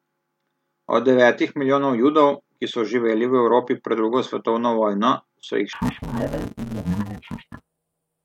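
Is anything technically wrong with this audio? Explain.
Yes. From 5.73 s to the end at 8.25 s, the speech shows interleaved audio read as planar. Each block of alternating left and right samples is split wrongly: its first half is taken as left, its second half as right. The blocks are very short, about 5.33 ms, which fits a 256-sample block, so there is no clear octave drop. Instead the speech turns dull and robotic, with a buzz at the block rate of 188 Hz.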